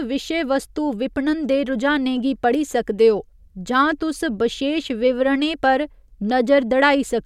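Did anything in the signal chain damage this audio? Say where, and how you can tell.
No, nothing in this speech shows signal-chain damage.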